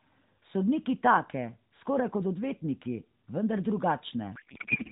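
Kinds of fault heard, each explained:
Codec payload misread: from 4.36 s to the end, the speech turns into garbled warbling noise that barely follows it. This points to AMR frames unpacked in the wrong layout, octet-aligned read as bandwidth-efficient. Unlike packet loss, nothing goes silent or repeats; the sound stays continuous but scrambled.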